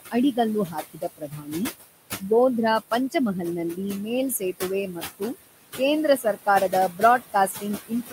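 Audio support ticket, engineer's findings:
Noise suppressor artifacts, whole clip. Background drops away between phrases and swells back under the speech. Noise suppressor reads the room noise, about 11 dB below speech, as steady noise and cuts those bands by about 16 dB frame by frame. The noise floor pumps with the speech.

Speech cut by the noise suppressor, three spans. 0.0–1.54 s: speech swallowed, deepest drop about 20 dB, roughly 0.7 s affected in total. 4.93–5.35 s: brief fade, about 16 dB, about a tenth of a second. 6.17 s to end: low-level speech faint, about 17 dB down. Suppressor misjudges quiet speech energy as noise and attenuates it with the background.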